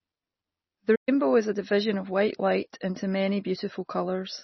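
Speech with heavy MP3 compression throughout, likely at a low bitrate around 24 kbps: nothing above 5.9 kHz, plus a watery, swirly texture on everything. There's also a playback stall from 0.95 to 1.09 s, a 120 ms dropout, likely the player running dry, before "is a division of" carries on.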